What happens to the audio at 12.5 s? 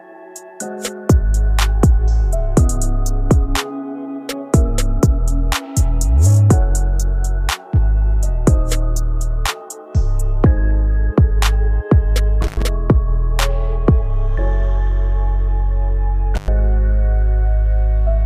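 At 12.5 s the audio hits an intermittent contact fault, spanning roughly 12.42 to 12.62 s. A loose plug or cable connection momentarily loses contact, breaking the signal path for about 99 ms within that window. The sound drops out abruptly, with crackle as the contact scrapes open and again as it reseats. While the line is open, a faint hiss remains in place of the programme material.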